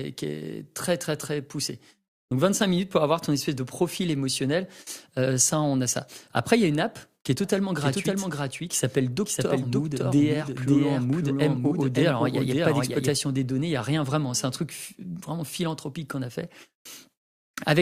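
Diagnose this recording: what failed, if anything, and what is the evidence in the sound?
The speech was likely captured twice, a slower second path mixing its copy back in: a doubled audio track. From 7.44 s, after "une app qui est", a dry copy trails about half a second late, roughly 5 dB quieter, stopping abruptly at 13.14 s, before "des données il n'y".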